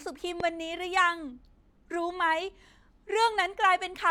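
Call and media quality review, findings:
Loud pop, 0.40–0.42 s. Single sharp transient, roughly 10 dB above the speech level; speech continues underneath. Likely a voltage step from a plug, switch or static discharge, or a driver glitch, entering the signal chain. Downstream filtering shapes the step into a brief pulse. No repeat events.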